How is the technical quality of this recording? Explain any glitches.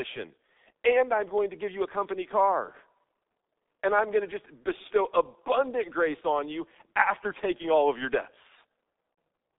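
Quality's pretty rough: the whole recording has gone through a G.723.1 codec, and there's one short dropout near the end.

The G.723.1 coding runs the full length. The band is squeezed to roughly 200 Hz to 3.7 kHz, and the heavy damage suggests a rate around 6 kbit/s. This codec works in coarse 30 ms chunks and only slowly refreshes its model of the voice, so the speech comes out muffled and a bit hoarse, with consonants smeared together.

At about 9.14 to 9.17 s there's VoIP packet loss concealed by the speech codec, a gap of about 30 ms that fits a single lost 30 ms frame. Instead of silence, the decoder fills in by repeating its last pitch and spectral shape while turning the level down. You hear a brief, stretched sound that fades rather than a clean cut.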